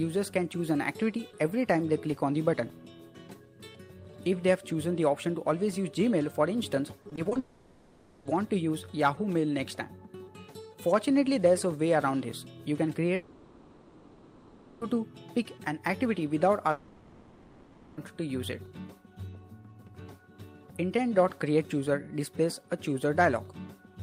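From 7.01 to 7.37 s there is repeated packet loss, giving a robotic sound. Six short holes appear, the longest 40 ms. Each is patched by stretching the previous sound. About 39% of this stretch is filled in, so it turns choppy.

Right after, from 7.39 to 8.27 s, the audio stalls for 0.86 s. Later it stalls again from 13.15 to 14.83 s and from 16.71 to 17.99 s. Each gap is filled with a smeared continuation of the last sound, with no silence. When the audio resumes, the missing portion is simply gone. These are likely long network dropouts.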